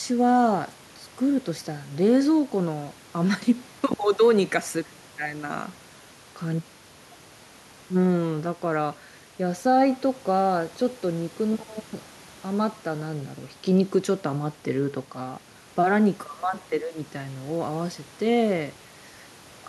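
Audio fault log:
Nothing in the speech stood out as a problem on listening.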